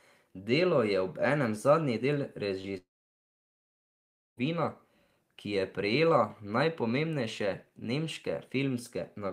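Just after "je obenem zadnji del", a brief smear at 2.61–2.65 s is short concealed packet loss: about 20 ms never arrived, and the receiver continued the preceding sound over the gap. From 2.77 to 4.39 s the speech trails into a fading buzz or hiss, then about 1.5 s of silence, likely a long network dropout losing roughly 1.6 s of audio.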